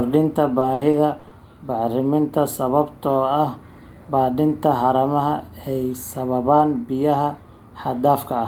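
Repeated packet loss (robotic sound) hits this speech clip from 0.59 to 1.33 s: five short gaps, the longest 80 ms, are each patched by stretching the preceding sound, so roughly a quarter of that stretch, about 200 ms, is concealed, leaving it choppy.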